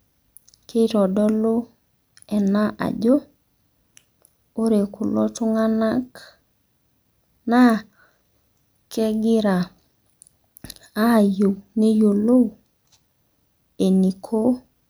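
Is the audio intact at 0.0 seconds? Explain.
Yes, at 0.0 seconds the audio is intact and no fault can be heard at that moment.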